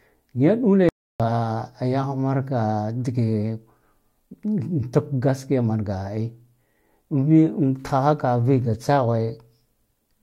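An audio dropout to silence, 0.89 to 1.20 s, cuts speech to silence with no room tone, unlike a gate, likely from input loss.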